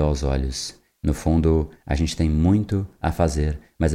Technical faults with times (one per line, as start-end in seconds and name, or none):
none